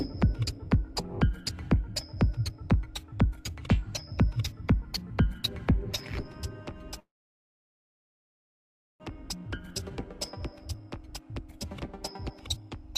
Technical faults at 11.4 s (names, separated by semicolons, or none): jitter buffer speed-up